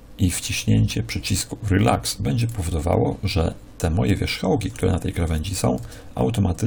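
Sample clock jitter runs through the whole clip: the converter's timing wanders by several microseconds, so each sample lands slightly early or late, and steep, fast-changing parts of the waveform come out wrong by the most. The result is a grainy hiss riding roughly 25 dB below the sound, swelling on loud and bright passages and disappearing in silences. A spectrogram shows a diffuse noise haze that tracks the signal's energy, densest in the upper bands.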